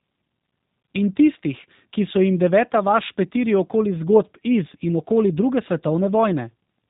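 From start to finish the speech carries G.729 codec damage, which fits an 8 kbit/s G.729A coder. Everything above 4 kHz is missing, and each voiced stretch is resynthesised from a filter, pitch predictor and sparse pulses, leaving a plainly rough, buzzy, synthetic texture.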